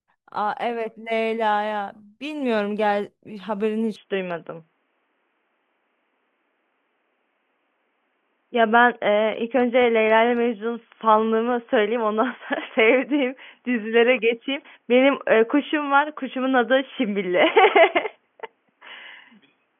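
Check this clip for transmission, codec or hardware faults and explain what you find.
One fault: from 3.96 s to the end, the speech turns dull and boxy, with nothing above 3.4 kHz, a level shift of roughly 5 dB and a faint new background, with no gap. This is likely an input switched to a poorer device, such as a headset call profile. A codec bandwidth drop alone would not also change the level and noise floor.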